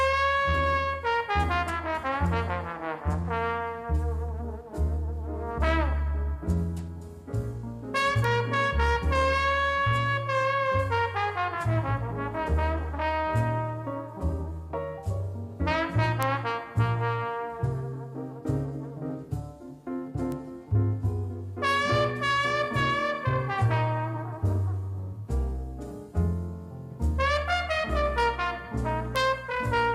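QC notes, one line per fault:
8.24, 16.23, 20.32 and 29.16 s: bit error spike. Each is one sharp, broadband tick unrelated to the sound around it, which points to a flipped bit in one sample, two at 29.16 s. The value jumps and returns, reaching about -17 to -5 dBFS, loudest at 16.23 s.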